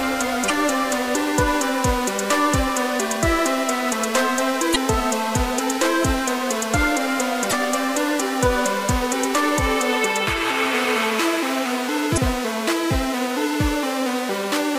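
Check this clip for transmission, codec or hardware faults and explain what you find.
Damaged data in a compressed stream appears four times, each burst about 44 ms long: at 0.46–0.50, 4.72–4.76, 7.49–7.53 and 12.14–12.18 s. Corrupted bytes make the decoder misread frames and lose sync, giving a brief chirp or squawk. On a spectrogram each burst is a narrow smeared vertical band, and on the waveform a short jagged discontinuity.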